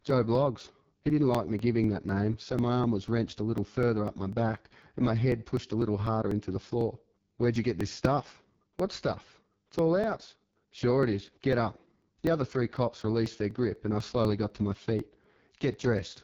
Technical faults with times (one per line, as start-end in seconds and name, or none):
0.00-16.23 AMR wideband (HD Voice) codec
0.10-15.99 periodic USB or driver dropouts